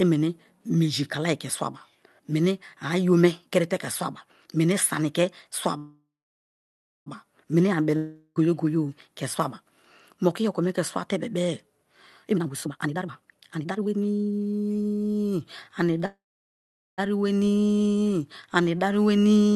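At 5.77 s there's a call audio freeze lasting until 7.08 s, just before "meni ani". The last bit of sound is stretched into a fading buzz, and then there's roughly a second of silence. That pattern most likely means packets were held up and the jitter buffer ran dry. When the speech resumes it picks up right where it stopped, so about 1.29 s of gap has been inserted and nothing is actually lost. The same thing happens again from 16.06 to 17.00 s: a short tail-off, then about 0.8 s of silence, then the speech carries on intact, about 0.92 s later than it should.

Right after "meni ani", from 7.96 to 8.38 s, there's a long network dropout. The sound smears briefly, goes quiet for a moment, and comes back further along. This time the missing stretch, about 0.4 s of speech, is gone for good, likely because those packets never arrived at all.

From 12.27 to 14.68 s the jitter buffer speed-up kicks in. 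The receiver had more audio queued than it wanted, so it snipped out tiny pitch-period slices over and over, roughly a second and a half in total. The speech runs at about 153% speed with unchanged pitch, so it sounds hurried and clipped. Under all of this the top end stops around 12 kHz, which fits an Opus call path.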